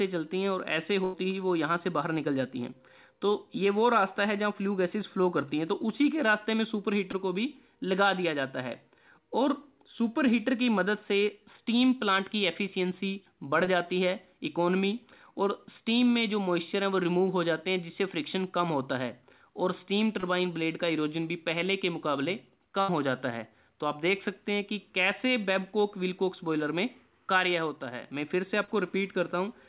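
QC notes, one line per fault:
1.04–1.15 s and 22.81–22.90 s: burst of packet loss. About 100 ms and 80 ms of audio went missing in a row. The receiver kept the last sound going and faded it down across the gap, so each spot becomes a held buzz or a fading hiss. The sound then picks up further on, with that stretch simply gone. The top end stops at 4 kHz, which fits a G.711 mu-law call path.
7.11–7.15 s, 13.65–13.69 s, 20.21–20.25 s, 28.64–28.69 s: short concealed packet loss. About 20 ms went missing at each of the first three, and about 40 ms at the last. The decoder bridged each hole by extending the preceding sound, pitched or noise-like as it was, then blended back into the real signal. Each is heard as a brief smear or wobble. A short sound at those moments can drop out entirely.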